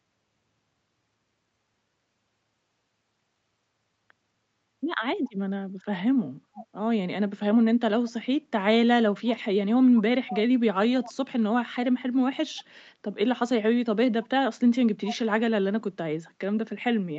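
Short delayed scraps of the speech, 0.41 s late, pop up at 5.25, 6.57, 9.96, 10.28, 11.03, 12.58, 14.23 and 15.05 s, from barely there to fairly clear. That's likely an echo leak, where a far-end speakerphone's canceller let its own playback slip back into the call.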